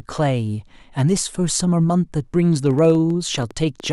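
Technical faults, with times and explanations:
2.66 to 3.87 s, train of clicks: a repeating electrical disturbance, likely interference from nearby equipment or a struggling interface, injects similar short pulses at an uneven pace of about 10.8 per second, some fifteen in all, heard as ticking over the speech at about the same level as the speech itself.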